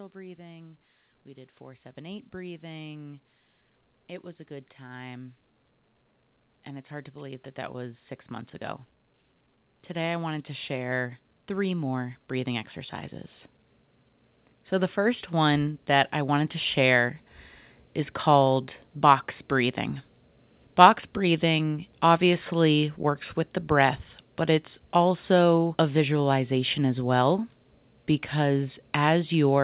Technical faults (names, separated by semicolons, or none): automatic gain rising